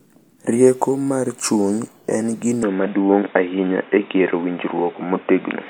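An input switched to a poorer device is the likely cause of what happens at 2.63 s and lasts to the end. With no gap at all, the speech abruptly turns dull and boxy, because nothing above 3.8 kHz comes through, and the loudness shifts by around 5 dB. A faint new background noise, roughly 30 dB under the speech, appears at the same moment, as if a different microphone or headset call path had taken over mid-recording.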